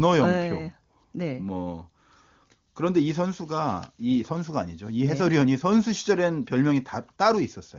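Nothing goes wrong anywhere in this speech clip, which comes through the AMR wideband (HD Voice) codec at its top rate of 23.85 kbit/s with no trouble to point to.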